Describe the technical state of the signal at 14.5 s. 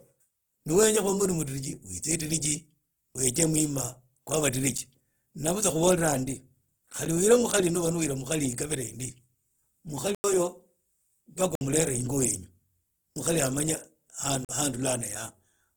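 At 14.45 s the speech drops out abruptly into a short hole of dead quiet lasting about 42 ms, until 14.49 s. This is a block of digital silence: a run of samples was replaced by zeros, typically because the output buffer was not filled in time. The speech jumps straight to zero and back, with no fade.

Around the same moment, the speech also has the smeared, watery coarseness of heavy data reduction, even though the file is an MP3 at a high bitrate. This is most likely low-bitrate audio saved at a high bitrate. The sound points to an earlier pass through a very low-bitrate codec, on the order of Opus at 16 kbit/s, whose artefacts the later high-bitrate MP3 encoding preserved but could not repair. There is no content above 20.2 kHz.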